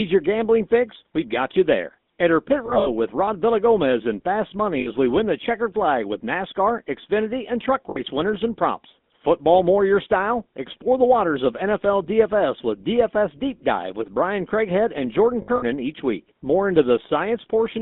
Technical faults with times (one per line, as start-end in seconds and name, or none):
0.00-17.82 GSM full-rate codec
2.66-2.89 lost GSM frames
4.80-4.88 lost GSM frames
7.90-8.01 lost GSM frames
15.42-15.63 lost GSM frames